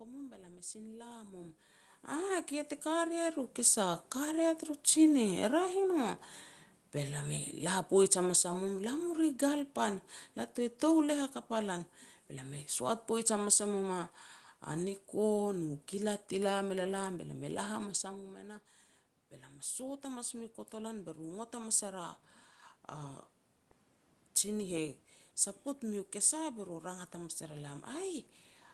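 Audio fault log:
2.1–4.5 s automatic gain rising: the gain control judged the input too quiet after the talker shifted near 1 s, raising gain about 8 dB, so voice and room noise swell together.
5.29–16.77 s automatic gain falling: the gain control found the input too loud or its background noise too strong and slowly pulled gain down about 6 dB, so speech and background sink together over eleven seconds.
18.02–27.88 s automatic gain rising: after the talker moved near 17.5 s and the input dropped about 11 dB, gain crept up about 7 dB, lifting voice and room noise together.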